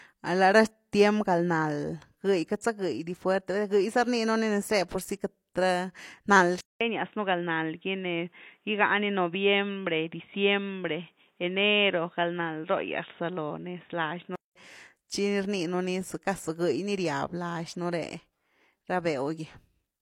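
Speech, with a band-limited stretch from 6.61 to 14.56 s. Nothing reaches above 3.8 kHz, a new noise floor sits well below the voice, and a 200 ms silence marks the switch. This is likely an input switched to a poorer device.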